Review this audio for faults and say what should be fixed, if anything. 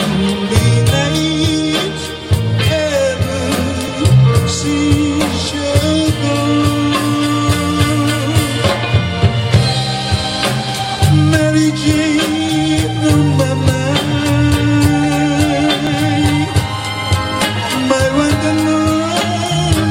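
Overlap between stream segments: 6-second segments carry overlapping time stamps, so the player discards real audio, producing tiny skips at 3.88 s and 15.87 s. To prevent it, segment time stamps should be generated so each segment starts exactly where the previous one ends.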